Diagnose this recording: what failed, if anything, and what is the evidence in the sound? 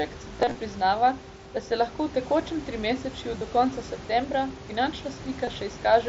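Short buzzy, tonal patches replace the speech at 0.36–0.55 s, with runs of up to 30 ms, and again at 3.39–3.41 s and 5.45–5.47 s. This is concealed Bluetooth headset packet loss on the wireless link, where missing packets were filled with repeated recent waveform.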